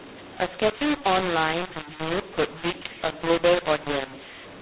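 From start to end the speech carries a mu-law and A-law mix-up. Samples written on the mu-law curve are decoded as A-law, scrambling levels into harsh distortion with hiss in the pauses. The waveform shows jagged, uneven peaks and never-silent gaps, while the spectrogram shows broadband grain capped at 4 kHz, which fits 8 kHz G.711 telephone coding.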